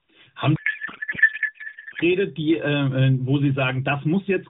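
In this speech recording, a codec payload misread from 0.56 to 2.02 s, with octet-aligned AMR frames unpacked as bandwidth-efficient, scrambles the decoder's parameters and replaces the speech with garbled noise and warble that barely tracks it. The AMR narrowband mobile codec path carries the audio with nothing above 4 kHz, at a light level of codec colouring that fits the 12.2 kbps mode.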